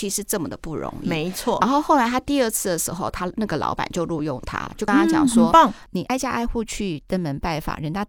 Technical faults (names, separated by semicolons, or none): compressed frames skipped; train of clicks